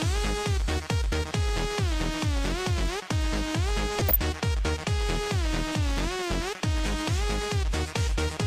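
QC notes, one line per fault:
3.99–4.24 s, DAB burbling: residual bit errors corrupt MP2 sub-band samples across 11 frames, giving short noise blips in single sub-bands; spectrogram shows isolated band-limited blocks.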